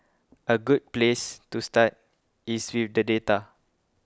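The speech recording has no audible technical faults anywhere along its length, and the signal stays steady and intact throughout.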